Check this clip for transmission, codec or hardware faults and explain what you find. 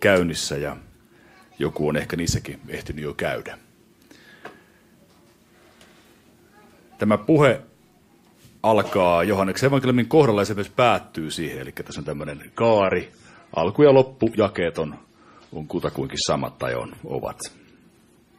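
There's one fault, and it runs to the end of the clip. From 11.86 s the audio switches abruptly, with no gap, to an adaptive stream at a lower bitrate. The player stepped down to a cheaper encode, which fits a drop from MP3 at 128 kbit/s to about 32 kbit/s, so the top end thins out, with nothing above 14.6 kHz, and the sound gets that swirly, smeared codec quality.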